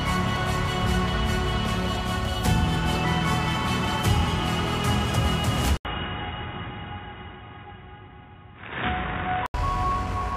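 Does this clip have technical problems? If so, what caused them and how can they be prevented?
Yes. From 5.77 to 9.54 s the sound goes boxy, with nothing above 3.8 kHz, after an 80 ms silence and with a faint new noise floor, at about the same overall level. The likely cause is the input switching to a poorer device. The gap and the changed background set it apart from a plain bandwidth drop. Prevent it by locking the recording input to one device.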